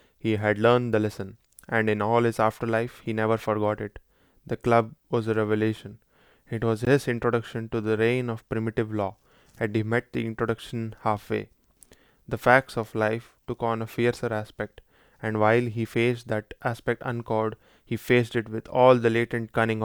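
At 6.85 s a brief hole of about 18 ms breaks the continuous speech, with smeared edges, before the sound resumes where it stopped. This is a gap at a join of encoded pieces: separately encoded segments were spliced without trimming the encoder's start delay and end padding.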